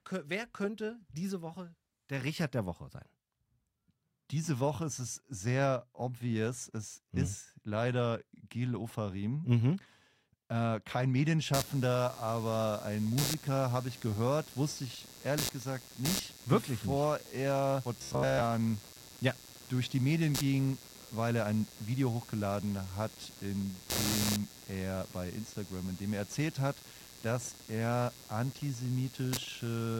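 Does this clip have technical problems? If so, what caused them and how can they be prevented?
Yes. From 11.54 s to the end, computer activity noise appears: load changes in the processor, graphics card or mouse disturb the ground the audio circuit shares with the computer, and that disturbance rides into the signal. It is heard as a buzzy, chirping scratch pulsing at around 150 Hz, only about 10 dB below the speech, rising and falling with the machine's activity rather than with the talking. Prevent it by using an isolated USB interface or a ground-loop isolator, and keeping the audio cable away from the computer.

From 17.99 to 18.41 s the speech turns into robotic sound from repeated short buffers. The likely cause is audio arriving too seldom, with the software covering each gap by replaying its last fragment while most of the real audio is skipped. Each fragment is about 15 ms long, so the repeats force a fixed, metallic buzz at 66.7 Hz onto the speech, which still follows the rough shape of the words. 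Prevent it by enlarging the audio buffer and reducing competing processor load.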